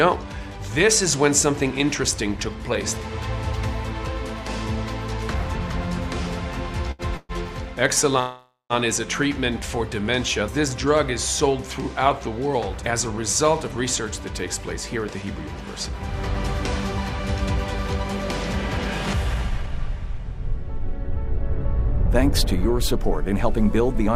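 At 6.91 to 7.02 s there is a short stall from a late packet. A packet arrived after its playout time, so the receiver held the last sound for about 75 ms and then resumed exactly where it had stopped, with nothing lost. It sounds like one brief, slightly buzzy prolongation. Unlike a freeze, it never fades into silence.

Two call audio freezes follow, at 7.17 to 7.32 s and at 8.20 to 8.73 s. Each time the sound stops moving forward. The last moment is carried on as a buzz that decays, and the audio then picks up where it stopped. The first fills about 121 ms and ends in roughly 20 ms of silence. The second fills about 502 ms, including about 150 ms of silence. The likely cause is packets held up in transit, leaving the jitter buffer empty. The fade and the silent tail are what set these apart from the shorter stall.

Jitter buffer speed-up appears at 13.69 to 16.01 s at 103% speed, trimming roughly 70 ms, and again at 19.49 to 24.09 s at 107%, trimming roughly 300 ms. 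To shed excess buffered delay, the receiver repeatedly cuts out tiny pitch-period-sized pieces. The faster second stretch therefore hurries along with its pitch unchanged, and that unchanged pitch is what distinguishes it from simply playing the audio faster.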